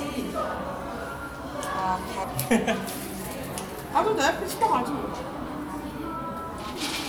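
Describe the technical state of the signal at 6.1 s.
At 6.1 s the sound plays through cleanly, with no dropout, distortion, clicks or other signal fault.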